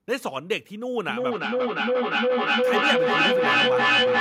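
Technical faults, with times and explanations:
1.09 s to the end: feedback echo between two devices. The sound returns at a steady interval of roughly 0.4 s, and each pass comes back thinner and more ringing than the last. The repeats build instead of fading, peaking about 7 dB above the speech itself. A second device in the same room is replaying this microphone's signal, which the microphone then captures again. The echo canceller cannot remove it because the playback comes from another device.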